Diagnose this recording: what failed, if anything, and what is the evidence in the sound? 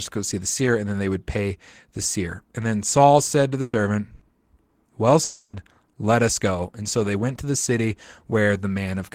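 Burst of packet loss at 3.61 to 3.76 s and again at 4.15 to 4.24 s, a network-stage fault. In the first the speech stalls into a held, fading sound for about 120 ms; in the second the same smeared continuation lasts about 60 ms. The receiver's concealment stretched the last received sound to cover packets that never arrived, and when real audio resumes it jumps ahead, so the speech in each gap is missing.

Long network dropout from 5.23 to 5.56 s. For about 300 ms the speech is replaced by a synthetic continuation of the last sound that decays in level without reaching silence, then the speech returns further along with that stretch gone. The length of the gap, far beyond a brief burst, points to a likely interruption of the incoming stream at the network stage, with the receiver's concealment covering the entire missing span.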